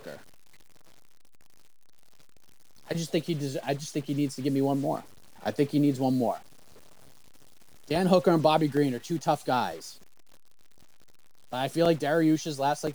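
A data bit in the speech path, likely stuck at a fixed value in the converter or its wiring, adds distortion throughout the clip and fills the pauses with noise. From 5.70 s to 12.87 s, periodic USB or driver dropouts stall the stream about every 1.02 s, each replacing a couple of milliseconds with silence, giving about seven regular ticks.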